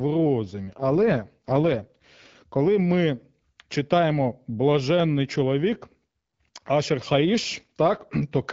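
From 0.68 to 2.36 s an AMR rate drop occurs: the link forces the AMR-WB coder down from its normal rate to its lowest, fitting roughly 12.65 to 6.6 kbit/s. The speech band stays intact and unbroken, but the voice turns rough, raspy and synthetic.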